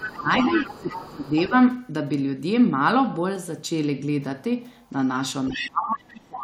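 From 0.00 to 0.98 s, the echo canceller likely fails to clear the loudspeaker signal from the microphone. The other side's voice leaks through about 10 dB below the talker, audible as a second voice underneath. With both sides active, the canceller likely mistakes the talker for echo. Speech is suppressed in double talk from 0.19 to 0.29 s, a brief dip of around 10 dB. From 0.51 to 1.33 s it drops by as much as 15 dB over most of that stretch, and the voice sounds pushed back.

Around 1.26 to 1.30 s a faint scrap of the other side's voice leaks through, far below the speech. The leakage is likely residual echo again. From 5.47 to 5.70 s the other side's voice leaks through, about 10 dB under the talker, because the canceller likely lets the echo path pass once more. Starting at 5.50 s and running to the end of the clip, speech is suppressed in double talk, likely because the canceller again treats the talker as echo. 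The voice falls away by as much as 30 dB.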